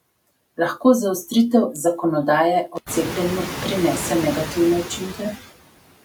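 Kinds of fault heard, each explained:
Noise suppressor artifacts: a suppressor working frame by frame pulls down the bands it judges to be steady noise, by about 21 dB here, so the background falls away between words and comes back up underneath them, most clearly once the room noise rises around 3 s.
Intermittent contact: a loose cable or plug briefly loses connection, breaking the signal from 2.75 to 2.87 s with the line open for about 77 ms; the audio drops out, crackles at each edge and leaves faint hiss during the gap.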